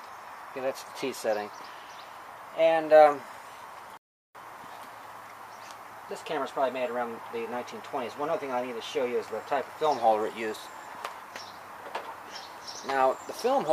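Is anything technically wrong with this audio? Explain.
Yes. A rebuffering stall occurs from 3.97 to 4.35 s: playback exhausted its downloaded audio and paused until more data arrived. The sound drops abruptly to silence for about 0.38 s, then picks up exactly where it stopped, so nothing is skipped but the clip runs that much longer.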